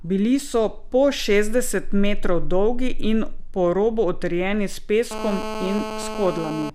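GSM phone buzz enters the speech at 5.11 s and lasts to 6.70 s: a steady, raspy 217 Hz buzz, harmonic-rich, about 9 dB below the speech. A nearby 2G phone on a call bursts 217 times a second, and the audio circuitry rectifies those pulses.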